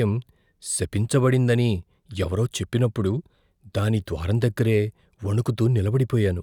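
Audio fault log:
No faults are heard anywhere in this speech recording. The log therefore has no timed entries.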